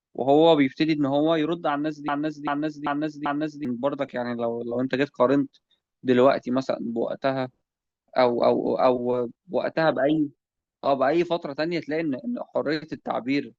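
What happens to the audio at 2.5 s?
The playback chain likely stalled and kept re-sending the last chunk of audio it held, producing a broken-record loop from 2.08 s to 3.65 s. A fragment of the speech about 0.39 s long repeats exactly, back to back, four times, so 2.5 s falls inside a stuttering cycle of identical snippets. Whatever should have been heard across that span never plays; the speech resumes at 3.65 s with that stretch missing.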